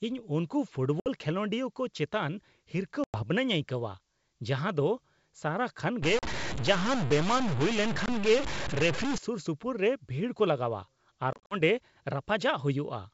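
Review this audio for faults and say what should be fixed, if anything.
Packet loss on an ADPCM call occurs five times. There are sharp-edged silent gaps at 1.00–1.09 s (60 ms lost), 3.04–3.18 s (100 ms), 6.19–6.24 s (40 ms) and 8.06–8.09 s (20 ms). At 11.33–11.55 s, 130 ms is lost in pieces, with the longest run 50 ms. Each gap knocks the decoder's adaptive predictor and step size out of step with the sender's. So the speech returns slightly distorted, then settles within some tens of milliseconds. Fix it with jitter buffering, retransmission or loss concealment that also resets the decoder's state.

A stuck bit affects 6.03–9.18 s. The sound gains noise or distortion, and pauses fill with noise instead of quiet. That pattern comes from one data bit held permanently at 0 or 1. About half the sample values are pushed off by that bit's weight, and small values near zero flip noisily. The likely cause is a broken data line or converter bit. 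It overlaps the gaps at 6.19 s and 8.06 s. The wideband G.722 coding adds at most faint damage of its own. To prevent it, check and repair the converter and its wiring, and add a data-path integrity test.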